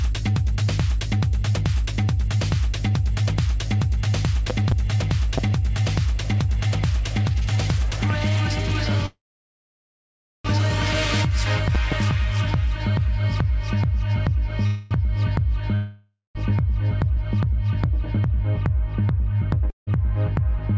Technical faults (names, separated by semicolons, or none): loud pop; call audio freeze; long network dropout; jitter buffer speed-up